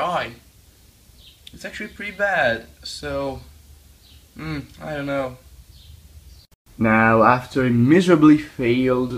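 There are no technical faults in this audio to describe.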